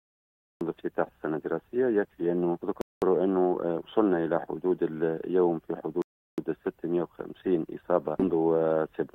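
Right at the top there's a cut-off start: nothing until 0.61 s, then the sound jumps in mid-stride with no attack, because the capture began late. Later come two rebuffering stalls, where playback ran dry and paused: silence from 2.81 to 3.02 s, adding 0.21 s, then 6.02 to 6.38 s, adding 0.36 s, each resuming exactly where it stopped.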